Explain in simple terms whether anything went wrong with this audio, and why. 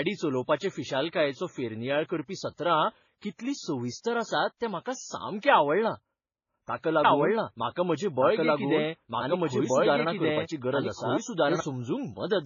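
Yes, two things went wrong. Throughout the speech there's transcoding between lossy codecs: the sound is dull, with nothing above about 7 kHz, and a mix of swirly, smeary compression artefacts stacked together. It was likely squeezed by one lossy codec, then re-squeezed by two more, each adding its own damage.

From 7.05 s to 11.6 s there's a doubled audio track: a second, equally loud copy of the speech runs about a second and a half behind, then cuts off abruptly. The likely cause is the same audio getting mixed in twice, out of step.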